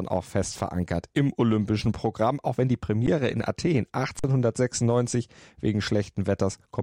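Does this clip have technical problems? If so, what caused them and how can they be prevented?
Yes. There is an underrun with held sample at 3.07 s, after "auch wenn die", and again from 4.19 to 4.24 s. The output buffer emptied and the waveform froze flat until data returned. A larger buffer or higher audio-thread priority prevents it.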